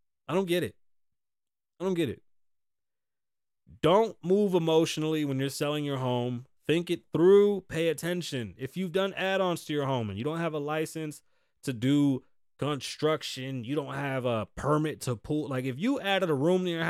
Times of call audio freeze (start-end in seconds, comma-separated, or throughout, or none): none